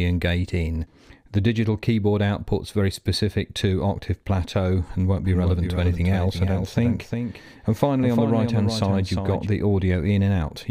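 From 5.25 s to 9.47 s a doubled audio track appears: a second, full-band copy trails about 400 ms behind, some 5 dB quieter, with no decay, likely from a slower second capture path. The waveform and spectrogram show every event repeated, starting and stopping abruptly.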